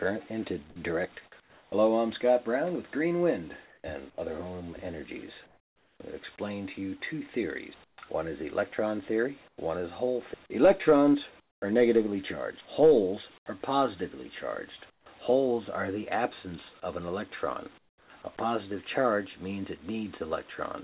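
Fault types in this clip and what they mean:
Comfort noise in place of the background: in eight pauses between 1.4 and 18.1 s, the real background gives way to smoother synthetic noise, about 7 to 19 dB quieter in seven of them. It is likely discontinuous transmission, and unlike a gate or dropout, the pauses never fall silent.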